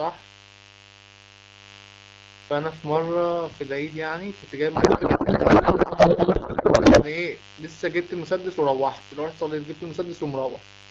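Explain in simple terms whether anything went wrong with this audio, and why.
Two things went wrong.

A mains buzz runs through the whole clip. It is a steady, raspy hum tied to the 50 Hz power supply. Electrical interference, such as a dimmer or poor shielding, leaked into the audio. The buzz sits well below the speech.

From 4.75 to 7.04 s there is a codec payload misread. The speech turns into garbled noise and warble that barely follows it. The two ends of the call disagreed on how the compressed data was packed, so the decoder read the pieces in the wrong places. The sound points to a mix-up between two packing styles used by AMR. The clear wideband phone sound returns afterwards.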